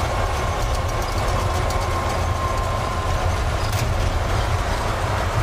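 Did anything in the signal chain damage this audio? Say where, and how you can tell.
No, nothing in the chain audibly damaged this audio.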